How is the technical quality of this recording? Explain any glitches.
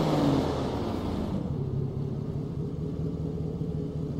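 Two clicks show up close together, about a fifth of a second apart, and both come from the digital side of things.

At 2.34 s there's a bit error spike: a single sample got one of its bits flipped, somewhere in memory or on a digital link, so its value leapt by a power of two and snapped straight back on the next sample. That gives you one crisp tick with energy smeared across the whole spectrum, and it has nothing to do with whatever the sound is doing at that instant.

At 2.55 s there's another sharp click, a thin vertical line if you look at a spectrogram. The likely cause is dropped samples: a tiny run, well under a millisecond's worth, went missing from the stream, so the waveform jumps from one value to a later one with nothing in between. The gap is far too short to cut out any audible sound. What you hear is just that discontinuity as a single click.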